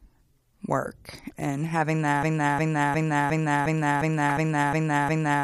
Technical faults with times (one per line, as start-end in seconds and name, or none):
2.23-5.43 broken-record loop
4.30 corrupt frame decoded